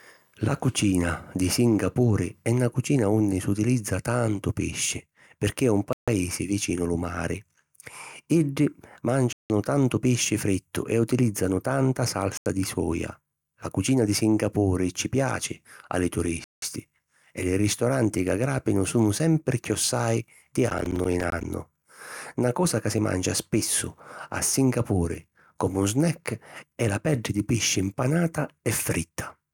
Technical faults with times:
5.93-6.08 Bluetooth stall
9.33-9.50 Bluetooth stall
12.37-12.46 Bluetooth stall
16.44-16.62 Bluetooth stall
20.70-21.44 processor overload crackle

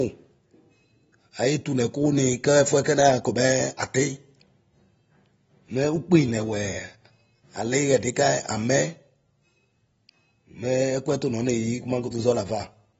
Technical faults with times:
0.00-12.99 AAC compression

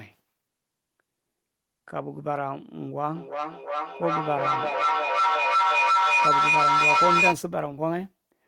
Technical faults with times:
3.15-7.43 feedback howl

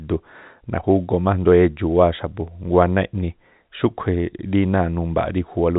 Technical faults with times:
none

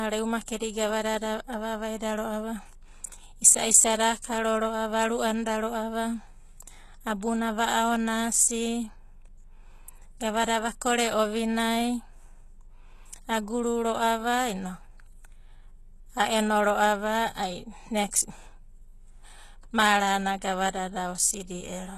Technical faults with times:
0.00-21.98 HE-AAC compression

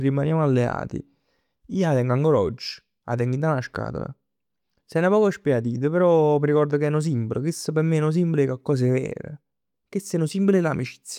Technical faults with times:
none

